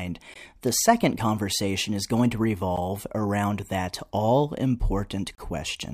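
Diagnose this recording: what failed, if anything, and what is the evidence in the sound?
The speech cuts to brief digital silence three times: at 0.34 s for about 18 ms, at 2.76 s for about 11 ms, and from 5.35 to 5.38 s for 32 ms. Each time it resumes without a fade. On a waveform these are flat, near-silent gaps. A spectrogram shows narrow full-height blank columns. The likely cause is a Bluetooth stall at the wireless playback link: delayed packets let the headphones' buffer run dry until retransmissions arrived.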